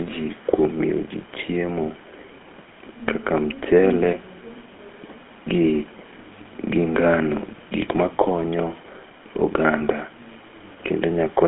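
Speech heard through the GSM full-rate codec for the whole clip, with a buzzy, gravelly texture, a line band of about 150 Hz to 3.4 kHz, and nothing above 3.6 kHz, which fits the 13 kbps full-rate coder. From 2.27 to 2.35 s, a very faint echo leak appears: a brief copy of the talker delayed by 330 ms, likely from a loudspeaker-side echo canceller letting residual pickup return.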